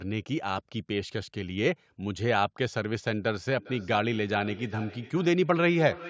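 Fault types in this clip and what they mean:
Feedback echo between two devices: Two devices in the same room joined the same call, so one device's speaker played what the other's microphone had sent, and that microphone captured it again; neither echo canceller could remove sound it had not played itself. From 3.58 s to the end of the speech, each phrase returns about every 400 ms as a thinner, ringing copy, reaching about 16 dB below the speech at its loudest.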